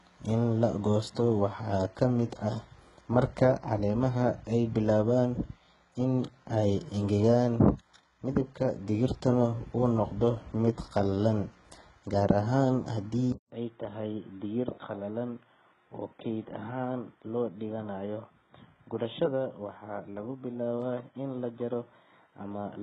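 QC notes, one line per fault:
throughout: HE-AAC compression. The likely cause is a low-bitrate HE-AAC encode, with damage heavy enough to fit a rate around 12 kbps. Only the lower band is coded; the treble is rebuilt by copying lower bands upward under a coarse envelope, and nothing reaches above 11 kHz. Because that synthetic treble is not the original, its harmonics fail to line up with those below the crossover, so s sounds come out gritty, metallic or lispy.
13.32 s to end: input switched to a poorer device. The recording likely moved mid-take to another microphone or a headset call profile. A gap of about 200 ms of silence marks the switch. After it, nothing passes above 3.8 kHz, so the speech turns dull and boxy. The level drops by roughly 5 dB, and a new noise floor appears about 50 dB under the signal, both belonging to the new device rather than the first.
16.88 s and 20.82 s: underrun with held sample. 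Twice the output buffer ran dry and the converter held its last value until data arrived again, for 0.16 ms and then 0.2 ms. During each hold the waveform sits flat, at whatever level it had reached, so the sound halts briefly without a clean break. Roughly the same span of live audio was lost each time, so playback resumes slightly ahead of where it stopped.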